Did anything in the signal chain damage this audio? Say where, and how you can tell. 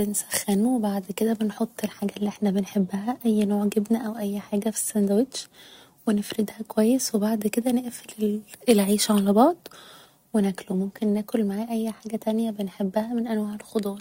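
No, nothing in the signal chain damaged this audio.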